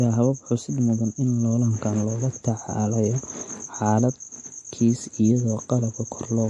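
MP3 compression runs throughout the speech, and the audio has a plainly audible watery, swirly quality. The likely cause is an encoder short of bits cutting the treble and switching weak frequency lines on and off, which fits a bitrate around 48 kbps.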